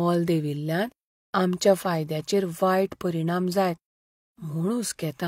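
Speech recording with no technical fault detectable anywhere in the clip.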